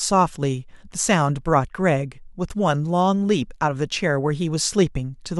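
Nothing stood out as a technical fault on listening to this speech recording.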